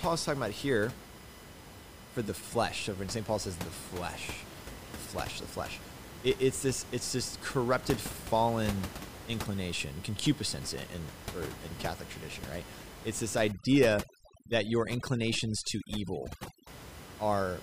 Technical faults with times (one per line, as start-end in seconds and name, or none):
0.00-17.62 USB whine
13.52-16.67 overdone noise removal